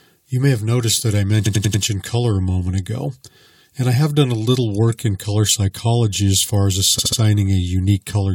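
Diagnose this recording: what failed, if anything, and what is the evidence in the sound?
The fault is repeated frames at the codec or storage stage. Just after "have noticed that I", a 92.9 ms block stutters four extra times from 1.45 to 1.82 s, adding 371.5 ms. After "psychology as far as", a 69.7 ms block repeats three more times from 6.98 to 7.19 s, adding 209 ms. Identical compressed material is decoded again, lengthening the audio. A dropout or buffer underrun would leave silence instead, not an exact replay.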